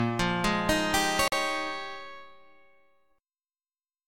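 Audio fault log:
1.28 to 1.33 s, Bluetooth dropout: The likely cause is audio packets failing to reach the headphones in time over the wireless link, so they were discarded and the output had nothing to play. The result is a hole of silence about 43 ms long, which fits two lost frames. When the sound returns it has moved on by the missing interval rather than picking up where it stopped, as though it had kept playing through the gap.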